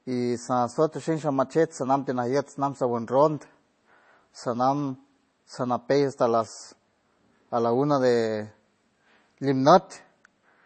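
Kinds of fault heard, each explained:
MP3 compression: An encoder starved of bits, likely MP3 at a rate that fits about 32 kbps, discards the treble and drops weak frequency lines from frame to frame. The speech has nothing above 8.3 kHz and a plainly audible watery, swirling texture throughout.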